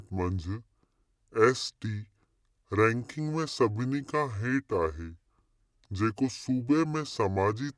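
From start to finish the speech sounds low and dragging, running at 0.69 times normal speed with pitch lowered by 6.45 semitones. This is a wrong sample rate: the samples play out slower than they were captured, a ratio that fits 32 kHz audio played at 22 kHz without conversion.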